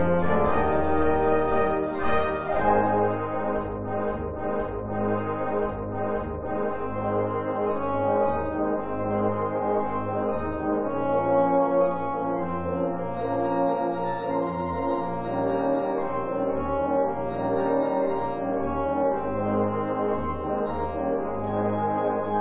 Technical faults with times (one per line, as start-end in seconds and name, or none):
none